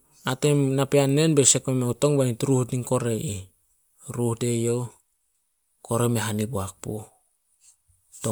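No technical faults are audible.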